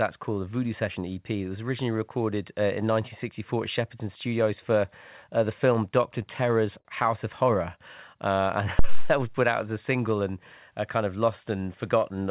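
At 6.79 to 6.87 s a packet reached the receiver late and the jitter buffer ran dry, a short stall from a late packet. The receiver stretched the last sound by about 59 ms until the packet came in, then carried on from the same point, so nothing is lost but one moment drags with a faint buzz or dip.

From 8.79 to 9.21 s, just before "was put out as", a supply was switched on a live input and the voltage step passed straight through the coupling capacitors. The result is a phantom power thump, a deep low thud that dies away over about 94 ms, heard through the narrow call band that stops at 4 kHz.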